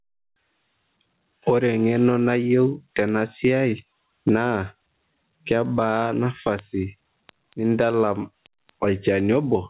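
Gain pumping runs throughout. The gain swings by about 20 dB. This is likely excessive mic gain hitting a fast limiter.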